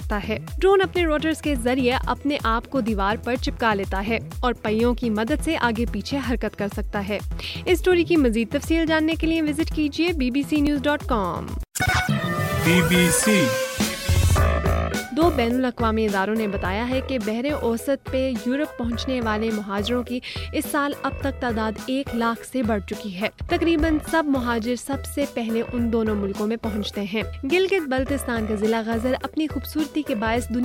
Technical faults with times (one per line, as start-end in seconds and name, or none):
10.67 dropped buffer (overrun)
16.65 dropped buffer (overrun)